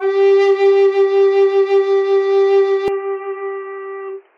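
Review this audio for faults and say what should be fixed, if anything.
Input switched to a poorer device, from 2.88 s to the end: the music suddenly turns dull and boxy, with nothing above 3.1 kHz, drops roughly 5 dB in level and gains a new noise floor well below the music. There is no gap at the change. This is likely the recording switching mid-take to a lesser microphone or a headset's call profile. Lock the input device and disable automatic device switching before recording.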